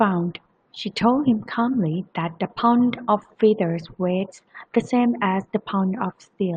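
Speech recording; no technical faults are audible anywhere.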